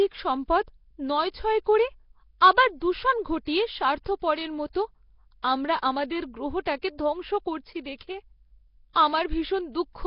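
Nellymoser compression, running throughout the speech from start to finish: the sound carries a rough, hissy halo and a smeared, underwater quality, and nothing remains above about 5.3 kHz. The cause is likely the old Flash microphone codec, which codes fixed blocks at two bits a sample and fills starved bands with noise instead of the real signal. The damage here is heavy, which fits a rate around 22 kbps.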